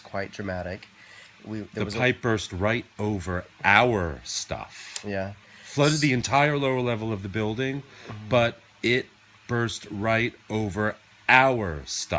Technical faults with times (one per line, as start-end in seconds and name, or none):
none